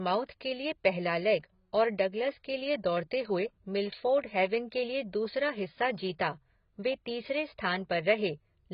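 Throughout, the speech has likely been through heavy AAC compression at a rate that fits about 16 kbps AAC-LC. The encoder discarded everything above 5.2 kHz and starved the remaining bands, leaving a dull, smeared sound with warbling, fizzy sibilants.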